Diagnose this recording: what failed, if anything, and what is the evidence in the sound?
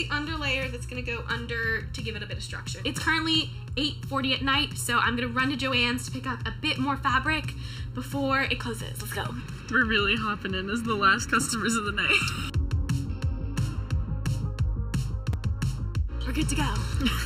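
Channel delay (comb filtering) runs through the whole clip, and it's why everything sounds hollow and a bit phasey. One channel trails the other by something like 0.7 ms, and when the two are folded to mono, whatever they share cancels at evenly spaced frequencies. The first notch sits somewhere around 700 Hz, with more stacked above it, and they never move. I'd look at the mixdown stage, where the sub-millisecond offset crept in before the sum.

There are also two blocks of digital silence, one at 14.27 s and one at 15.33 s, lasting about 2.9 ms and 4.2 ms. At that length each one comes across as a sharp tick rather than a gap. The signal cuts out and snaps back with no fade. That points to the driver or buffer stage missing its deadline and leaving the output unfilled. The first gap fits a 128-sample buffer.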